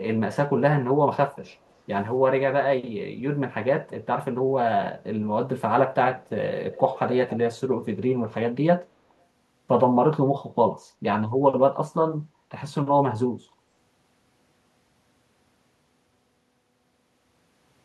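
From 6.72 to 7.38 s a faint, delayed copy of the speech trails the original by 281 ms, sitting roughly 15 dB below it. This is an echo leak, likely from a far end on loudspeaker whose echo canceller let part of its microphone pickup return down the line. What separates it from room reverberation is the distinct, fixed lag: it arrives as a discrete repeat rather than a smooth decaying tail.

At 12.35 s, through 12.44 s, the background is gated by the echo canceller. While the far-end loudspeaker played, the canceller pulled the microphone down, so the room sound dips by about 6 dB for around 70 ms before recovering. Unlike a network dropout, nothing is lost or replaced. The ambience simply sinks briefly and comes back intact.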